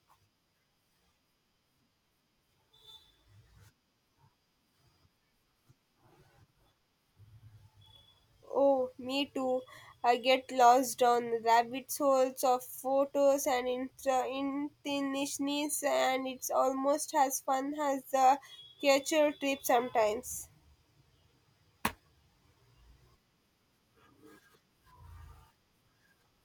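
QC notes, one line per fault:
No faults heard in this speech recording.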